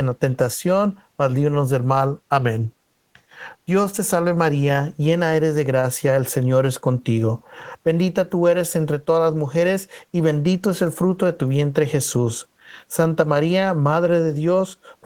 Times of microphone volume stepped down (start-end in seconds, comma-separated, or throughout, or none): none